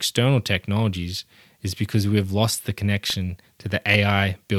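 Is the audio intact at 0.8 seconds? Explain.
Yes, the audio is intact at 0.8 seconds, with no fault at that moment.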